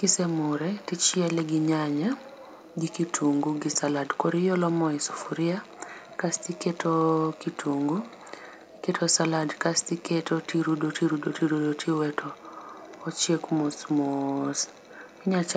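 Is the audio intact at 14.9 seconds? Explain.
No. From 14.81 to 14.89 s there is an echo leak, a very faint copy of the speech returning about 369 ms late. The likely cause is a far-end loudspeaker whose echo canceller let a scrap of its microphone pickup through and sent it back. Unlike room reverberation, which smears directly onto the tail of each sound, this is a separate repeat arriving a distinct beat afterward, heard just above the low room noise.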